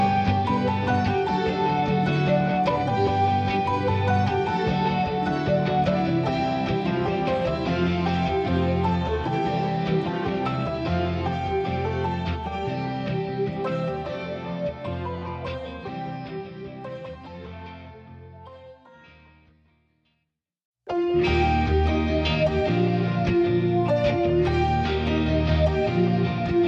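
No technical fault can be heard anywhere in the audio. There is nothing in it that calls for a time, a value or a cause.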